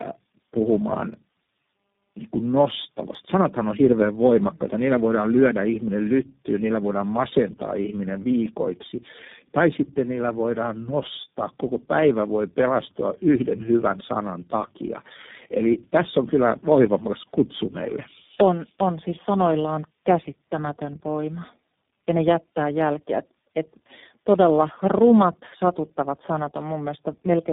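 Throughout the speech, tandem speech coding is audible: three low-rate speech codecs in a row (GSM full rate, AMR-NB, then iLBC, with G.711 links between), each re-coding the last one's damage. Speech sounds rough, muffled and warbly; a spectrogram shows nothing above 3.7 kHz and smeared, blotchy harmonics.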